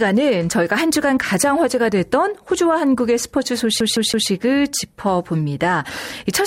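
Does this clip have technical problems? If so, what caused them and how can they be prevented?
Yes. From 3.8 to 4.29 s the CD gets stuck on one turn: a scratch knocks the laser back a track at the same point of each disc rotation, so the player keeps rereading the same stretch. You hear a segment of about 0.16 s play three times in a row, each repeat cut off by a brief mute at the jump, giving the quick, evenly spaced stutter of a skipping disc. Cleaning or resurfacing the disc, or ripping it with an error-correcting extraction tool before use, prevents this.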